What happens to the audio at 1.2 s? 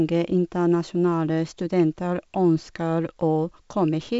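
Nothing goes wrong at 1.2 s: the speech carries on intact through that moment, with only the usual band limit of G.722 wideband telephone coding, which leaves nothing above about 7.7 kHz.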